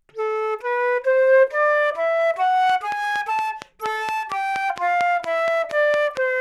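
An everyday sound recording with a train of clicks: a steady ticking, about fifteen sharp pops at 4.3 per second standing well above the sound, from 2.70 to 6.18 s, likely interference or a faulty connection.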